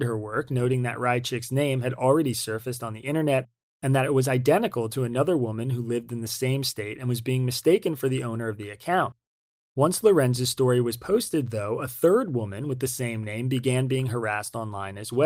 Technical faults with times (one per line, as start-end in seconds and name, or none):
none